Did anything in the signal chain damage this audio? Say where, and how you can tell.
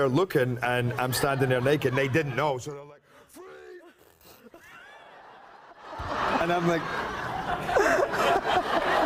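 No, nothing along the signal chain has damaged this audio, and its level moves smoothly wherever it changes.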